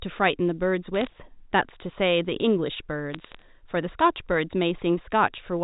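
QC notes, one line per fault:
0.95 to 1.07 s, bit errors on a digital phone line: scattered bits in the G.711 A-law stream were flipped at a rate of around 0.2 percent, each corrupting a single sample. Where a sign or high-order bit is hit, that sample jumps far from its neighbours, producing sharp ticks over intact speech.
3.13 to 3.42 s, bit errors on a digital phone line: a longer burst at a similar rate gives a longer run of clicks, heard as brief crackle over the speech.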